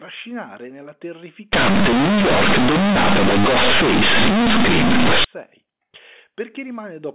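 From 1.53 s to 5.24 s the speech turns into a loud, harsh buzz with heavy noise filling the pauses. That's companded audio read as linear: the mu-law bytes from the G.711 telephone coding are being played as plain 8-bit samples with no expansion step. Every sign change throws the output across about half its range, so quiet sounds come out as big as loud ones and the waveform gets mangled. Before and after that stretch, the telephone band stops at 4 kHz.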